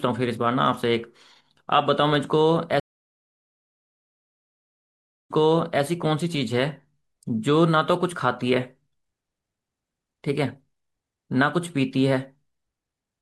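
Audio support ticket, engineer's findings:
Stream reconnect, 2.80–5.83 s. Audio drops to silence for 2.5 s, then resumes about 0.53 s earlier than where it cut, so a short stretch repeats. Connection lost, player reconnected, server resent a burst into a fresh decoder. Waveform: flat gap, then onset fading in from zero.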